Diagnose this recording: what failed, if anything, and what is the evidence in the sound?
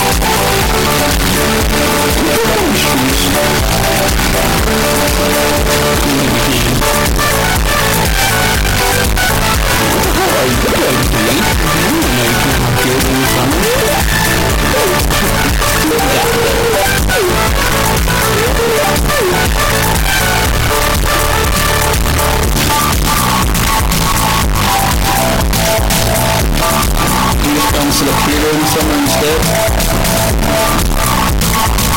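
Float read as integer, throughout the clip, at the sample-format conversion stage. The waveform is nearly square and sits at an almost fixed, high level whatever the source level, so everything is uniformly loud and harsh and the background noise comes up as loud as the foreground sound, yet pitch can still be followed. The likely cause is 32-bit float samples interpreted as 32-bit integers, so sign and exponent bits dominate each value.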